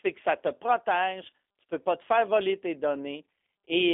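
Speech squeezed through a G.729 codec the whole way: nothing above about 3.6 kHz, a thin telephone band, and a plainly rough, synthetic edge from the rebuilt filter-and-pulse excitation, which fits an 8 kbit/s G.729A line.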